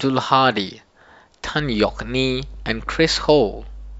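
From 1.59 s to the end of the clip, a mains hum sits under the speech: a steady low tone at 50 Hz, roughly 15 dB below the speech level. It comes from power-line current leaking into the signal path, typically through a ground loop or induction from a nearby transformer.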